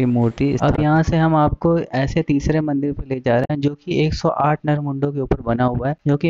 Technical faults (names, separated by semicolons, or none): damaged data in a compressed stream